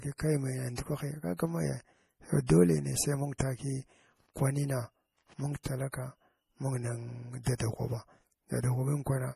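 Speech clip with a constant watery, swirly coloring and nothing above 15 kHz. That's likely MP3 compression at a low bitrate, something like 40 kbps, where the encoder chops the treble and lets weak frequency lines flicker on and off between frames, so the damage is plainly audible. On top of that there's pre-echo: a short hiss ahead of sharp onsets, with the attacks sounding soft. The codec's block-wide quantisation noise bleeds into the quiet just before each hit. You hear it at 0.75–0.78 s, at 2.46–2.49 s right before "neh sai mung", at 3.38 s just after "neh sai mung", and at 5.63–5.65 s, 7.43–7.46 s and 7.55–7.60 s, each smear lasting roughly 20 to 50 ms.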